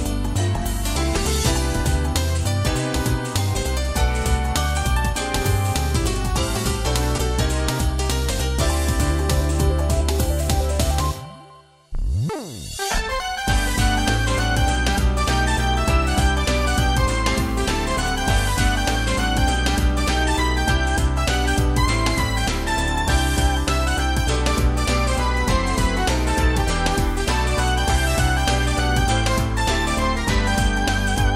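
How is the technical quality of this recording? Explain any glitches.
The recording has two glitches, both audible as jumps in the sound. At 7.18 s and again at 13.2 s there is a sudden skip forward with no gap of silence. The likely cause is a dropped buffer (overrun): samples were overwritten before the software read them, so the surrounding audio is spliced directly together. Roughly 70 ms goes missing at 7.18 s, and only about 20 ms at 13.2 s.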